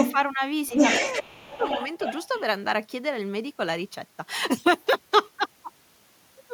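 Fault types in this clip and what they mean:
Other side's voice leaking through: A second voice is heard under the talker, at first a brief scrap from 0.0 to 0.16 s sitting somewhat louder than the main speech, then a longer stretch from 0.71 to 2.41 s at roughly equal level. It is likely loudspeaker playback that the echo canceller did not fully remove. On a spectrogram, two sets of harmonic striations overlap, and the waveform shows steady energy filling the gaps between the talker's syllables.
Speech suppressed in double talk: Between 1.22 and 1.6 s, while the leaking voice is present, the talker's speech dips sharply in pieces, falling by roughly 20 dB at its deepest across about a third of a second in total. The likely cause is an echo canceller that could not tell the near talker from the echo and attenuated both. The waveform envelope shows clear notches there, and the spectrogram goes faint.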